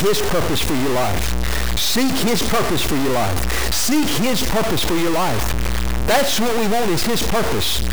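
A speech recording carries a stuck bit from start to finish: a harsh, buzzy distortion rides on every passage, and the pauses between phrases fill with loud noise rather than falling quiet. The likely cause is one data bit held fixed by a faulty line or converter, knocking about half the samples off by a step near -15 dBFS. On a waveform, silences show a dense offset band; a spectrogram shows broadband hash throughout.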